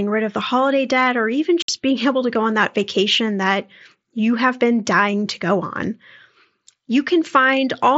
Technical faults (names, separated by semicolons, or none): unconcealed Bluetooth headset packet loss